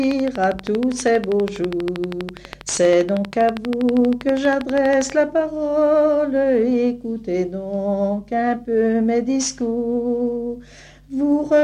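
A train of clicks runs from 0.04 to 5.11 s, about 12.4 per second at regular spacing, around seventy sharp pulses peaking roughly 10 dB above the sound, likely from electrical interference. They appear as evenly spaced vertical lines on a spectrogram and repeated spikes on the waveform.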